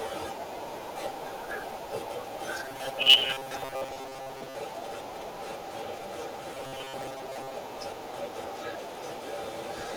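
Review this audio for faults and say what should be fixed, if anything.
Robotic sound from repeated short buffers at 2.64–4.55 s and 6.55–7.56 s: a rigid 134 Hz buzz, likely a 7.5 ms chunk looping while about half, then most, of the speech is skipped. Fix it with a deeper jitter buffer or steadier packet delivery, so playback never has to loop stale audio.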